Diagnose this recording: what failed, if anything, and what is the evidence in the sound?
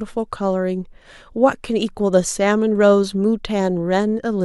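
Nothing in this recording points to a failure at any stage of the chain. The speech carries on without a single audible event that would call for a diagnosis.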